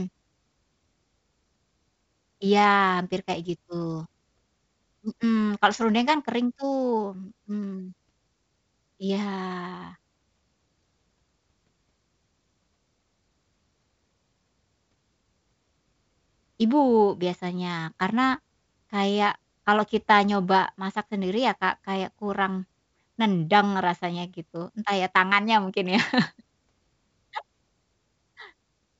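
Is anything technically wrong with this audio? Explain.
No, nothing is technically wrong.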